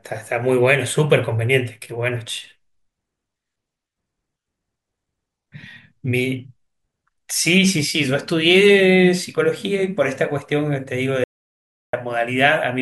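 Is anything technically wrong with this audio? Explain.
Yes. From 11.24 to 11.93 s the speech cuts to an audio dropout to silence, lasting about 0.69 s. The input was likely lost while recording continued, so silence was written. The gap is dead silent, with no room tone. The speech during it is gone.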